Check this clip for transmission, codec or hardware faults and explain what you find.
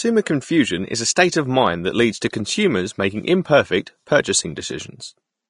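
One codec fault runs through the whole speech clip. Throughout, the audio sounds hissy and grainy, with nothing above 10.6 kHz, roughened tones and smeared consonant onsets, likely Vorbis compression at a low setting, consistent with roughly 37 kbps. The encoder discards the top band and quantises the remaining treble coarsely, replacing fine detail with noise-like texture.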